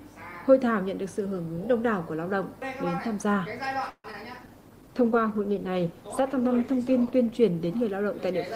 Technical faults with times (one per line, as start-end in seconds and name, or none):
3.89-4.06 call audio freeze
4.12-4.15 short concealed packet loss
4.39-8.56 call bitrate drop